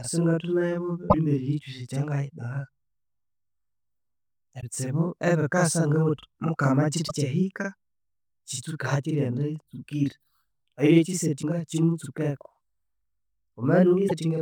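A speech recording with two distinct faults. Throughout, a channel delay (doubling) is audible: one channel runs about 43 ms behind the other, and when the two are summed to mono the late copy sits right behind the original at the same level. That fits a 2048-sample buffer at 48 kHz. Unlike room reverb, it is a single discrete slap that never decays into a tail, and unlike comb-filter phasing it is long enough to be heard as a second voice. Five times there is damaged data in a compressed stream: 1.07–1.15 s, just before "kyosi ekyangayidagha"; 4.57–4.63 s; 7.05–7.11 s, right after "ebikasa ngabuthi mukama"; 11.39–11.44 s; and 14.05–14.12 s. Each is a short glitch, a chirp, squawk, click or brief hole, where the decoder misreads corrupted frames and resyncs at the next header. What separates it from a plain dropout is that the decoder loses sync and searches for the next frame header.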